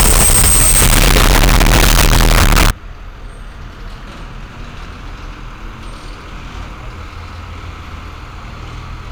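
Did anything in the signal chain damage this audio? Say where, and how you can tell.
Yes. From 0 to 2.7 s the sound is harsh, very loud distortion with no quiet moments, likely signed and unsigned mixed up in sample-format conversion of 16-bit samples, flipping the top bit so each zero crossing jumps across the whole range.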